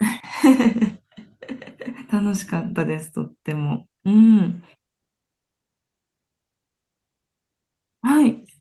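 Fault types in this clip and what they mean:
No technical faults can be heard anywhere in this speech clip.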